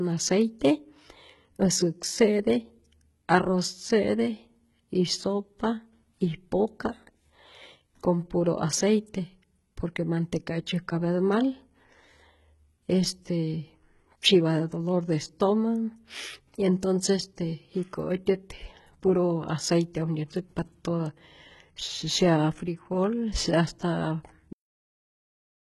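The whole clip carries heavy codec damage, with nothing above 11.8 kHz and gritty, lispy treble rebuilt from lower bands, likely HE-AAC compression at something like 16 kbps. Then at 24.53 s, right after "sea hasta", there's a cut-off end: the speech stops mid-sound with no decay, and silence runs to the end.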